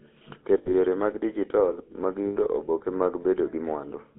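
Throughout, the speech carries the buzzy, gravelly roughness of the GSM full-rate codec, which fits a 13 kbit/s stream. The vocal tract is rebuilt from coarse pulse excitation, and the line band runs only from 250 Hz to 3.5 kHz. That pulse buzz sets it apart from clean band-limiting.

From 0.58 to 0.75 s, just before "yore mag dijital mag", and again from 2.26 to 2.37 s, before "oboke mag", lost GSM frames cause the decoder to repeat the last good frame. The result is a rough metallic ring, not a silent gap or click.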